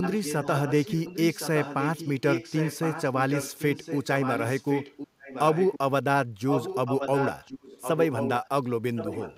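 From 0.01 to 5.79 s, 6.46 to 8.48 s and 8.95 s to the end there's an echo leak. A copy of the speech comes back about 1.07 s late, fairly quiet but louder in the middle stretch, likely from a far-end speakerphone whose echo canceller didn't fully clean up its mic.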